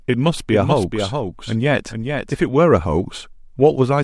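From 0.51 s to 2.47 s the speech is shadowed by a second copy of itself, trailing roughly 0.4 s behind and only a few decibels quieter. It carries the full frequency range with no reverberant tail or room tint, and it switches on and off abruptly at those two points. This is a doubled audio track, likely from the signal being captured again through a slower path, so two out-of-step copies end up mixed together.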